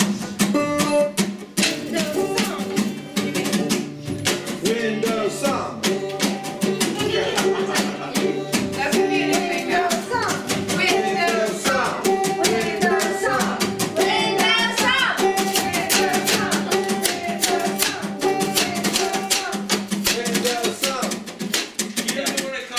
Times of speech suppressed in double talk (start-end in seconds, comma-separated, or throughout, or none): none